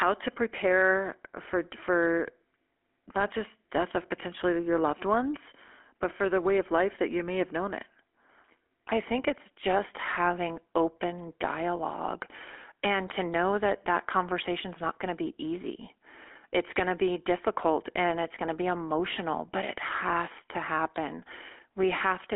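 From start to finish, the speech has a buzzy, gravelly roughness, and it sounds thin and boxed in, with no low end below about 250 Hz and nothing above about 3.4 kHz. This is GSM full-rate codec damage, and it is plainly audible. The codec models the vocal tract and replaces the true excitation with a coarse pulse train, which fits the 13 kbit/s full-rate mode. That crude excitation produces the grainy buzz, and the telephone band limits cause the muffling.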